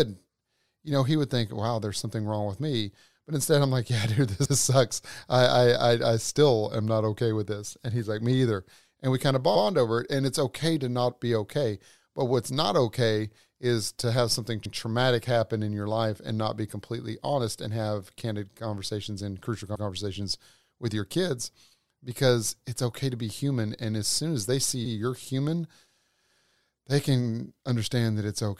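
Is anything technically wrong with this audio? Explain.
Yes. This speech has overlapping chunks at 4.45–4.56 s (just before "sucks I"), 14.65–14.76 s (between "is to have something" and "happen in your life") and 19.75–19.86 s (after "candid conversations and crucial"). Each chunk, about 5 s long, starts before the previous one ends, so 100 ms of audio plays twice at the join. This is heard as a short stutter. Unlike a dropout, nothing is missing; the sound is duplicated.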